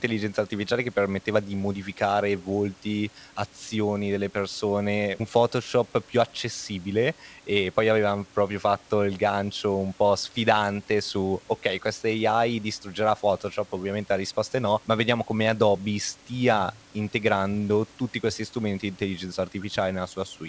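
Speech over a wideband call link with nothing above 8 kHz and room noise about 31 dB below the talker, and no technical faults to report.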